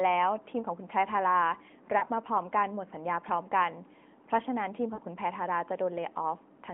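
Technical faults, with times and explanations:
1.98–2.04 s and 4.94–5.00 s, lost AMR speech frames: about 40 ms drops out each time, consistent with two 20 ms frames. The decoder held the last pitch and vocal-tract settings at falling gain, so the narrowband sound briefly smears and dips before recovering.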